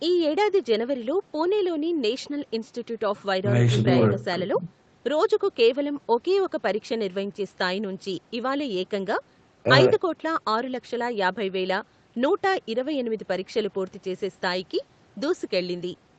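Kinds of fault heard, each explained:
No faults detected; the top end stops at 8 kHz, which is expected of a wideband Opus call path at 32 kbps and is not itself a fault.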